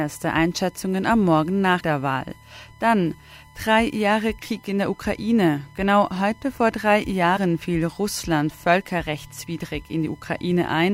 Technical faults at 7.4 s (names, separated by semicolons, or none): USB whine; compressed frames skipped